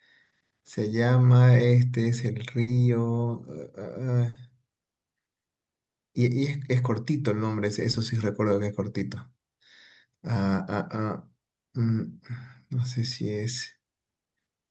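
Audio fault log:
2.61–2.69 s and 4.29–4.37 s: burst of packet loss. Each time the receiver stretches the last sound for about 60 ms, fading it, then playback resumes with roughly 60 ms of speech skipped.
7.91–7.95 s: short concealed packet loss. About 20 ms never arrived, so the decoder extrapolated the preceding sound and crossfaded back, leaving a brief smear in the speech.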